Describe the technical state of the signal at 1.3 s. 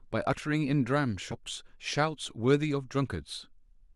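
Compressed frames skipped between 1.31 and 1.34 s: the decoder jumps past around 40 ms of speech, about two 20 ms frames, so the speech resumes abruptly at the join. The waveform shows a splice with no gap, and the spectrogram a vertical discontinuity where the harmonics shift abruptly.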